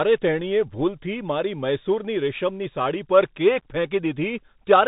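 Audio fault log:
throughout: Bluetooth CVSD headset codec. The speech is squeezed into a narrow band, with nothing above 4 kHz, so it sounds boxed in and dull. The damage is plainly audible. Each sample here is a single up-or-down bit, and the step size has to adapt as it goes. Loud high sounds outrun that step and break up into distortion. S sounds come out scratchy. A grainy hiss sits under the speech. All of this fits a 64 kbps CVSD link.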